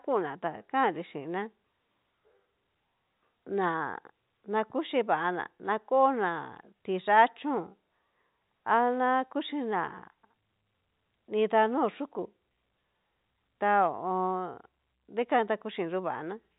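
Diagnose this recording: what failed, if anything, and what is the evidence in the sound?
Nothing in the speech points to a failure at any stage of the chain. The band stops at 3.8 kHz, as expected of G.711 telephone coding, and the A-law quantisation noise that follows the level of the speech is faint at most.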